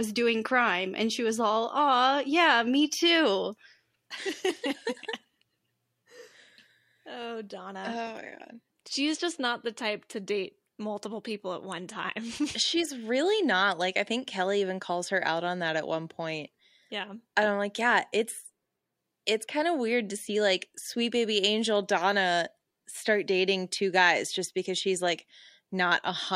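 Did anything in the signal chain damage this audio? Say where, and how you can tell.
No, nothing in the chain did.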